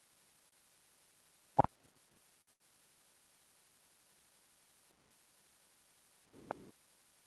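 At 2.41 to 2.50 s there is a short stall from a late packet. The jitter buffer ran dry, so the last sound is stretched by about 58 ms with a faint buzz, then resumes where it left off. Unlike a loss, nothing is skipped; the timing simply slips.

Straight after, at 2.53 to 2.63 s, comes a burst of packet loss. About 60 ms of audio never arrived, and concealment filled roughly 63 ms with a fading continuation of the previous sound. The difference from the stall is the jump afterwards: the speech picks up further on, with that stretch missing.

Throughout, the Opus call path rolls off content above 12 kHz.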